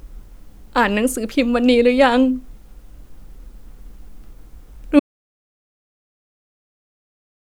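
A short speech recording that suffers an audio dropout to silence beginning at 4.99 s and running to the end of the clip. The signal stops abruptly mid-flow and is replaced by silence, with no room tone or noise floor remaining, so nothing after that point survives. The likely cause is a lost input, such as a disconnected device, failed link or accidental mute, while the recorder kept writing silence.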